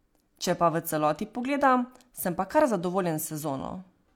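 No technical faults can be heard anywhere in the recording, and the signal stays intact and continuous throughout.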